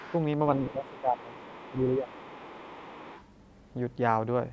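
A faint second voice sits under the speech from 0.0 to 0.17 s and again from 0.6 to 0.68 s. This is the other side's voice leaking through. It is likely loudspeaker sound that the echo canceller failed to remove from the microphone. It stays well below the talker, roughly 20 to 30 dB down. It comes and goes in short scraps.

From 0.67 to 1.38 s the talker's speech is suppressed in double talk. The level sinks, by about 15 dB at its deepest. Meanwhile the leak returns at 0.87 to 1.0 s and 1.17 to 1.83 s. With both sides active, the canceller likely turned everything down together. A second dip of about 10 dB follows from 1.71 to 2.18 s. The longest leak runs from 2.06 to 3.24 s, again about 20 dB under the speech.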